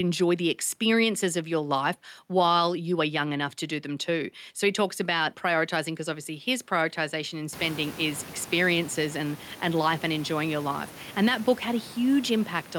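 Nothing technical goes wrong in this speech recording: the room's own background noise climbs by about 22 dB at around seven and a half seconds, but that's just the space around the microphone and it stays about 22 dB below the speech.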